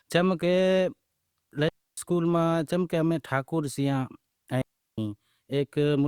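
At 1.69 s the speech drops into a clean hole of near silence lasting about 0.29 s, ending at 1.97 s. A second gap follows at 4.62 s, lasting about 0.36 s, until 4.98 s. Both are digital wireless dropouts. The radio link lost too much data, so the receiver muted rather than play damaged audio. The fade in and out is very short. No crackle or noise burst comes before or after either gap.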